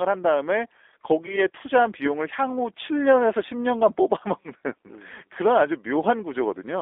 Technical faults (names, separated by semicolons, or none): G.729 codec; VoIP packet loss concealed by the speech codec